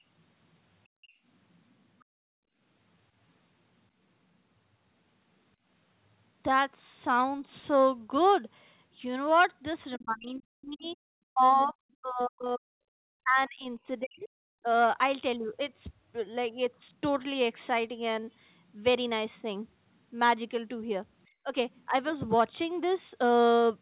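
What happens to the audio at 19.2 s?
Nothing goes wrong at 19.2 s: the speech carries on intact through that moment, with only the narrow telephone-band sound of the call path, which has nothing above about 4 kHz.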